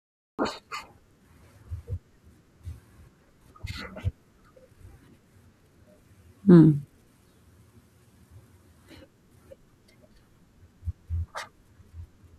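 The clip opens with a cut-off start: digital silence runs until about 0.39 s, then speech enters abruptly in the middle of a sound, because capture began after the talker had already started. There is no attack or onset, just an instant jump to full level. Unlike a dropout, nothing plays before the gap. Unlike a noise gate or slow fade-in, the level doesn't ramp, and the first sound is clearly truncated rather than merely quiet.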